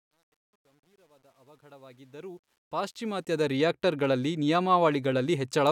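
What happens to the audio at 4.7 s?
At 4.7 s the speech carries on intact, with no dropout, click or other fault at that point.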